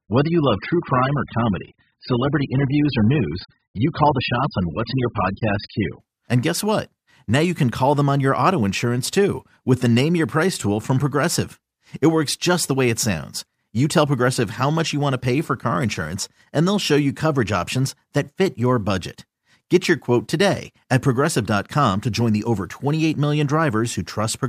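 From 0 to 6.0 s, an adaptive stream starting at a low bitrate leaves nothing above 5 kHz; quality then jumps with no gap, unlike a dropout.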